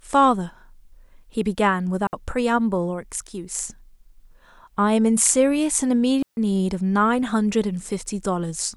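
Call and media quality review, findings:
Clean near-silent holes in the speech, no noise burst either side: 2.07–2.13 s (60 ms), 6.23–6.37 s (0.15 s). Digital wireless dropout, receiver muting on lost link data.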